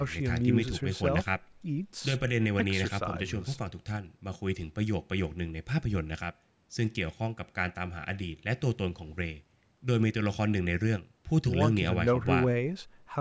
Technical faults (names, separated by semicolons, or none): none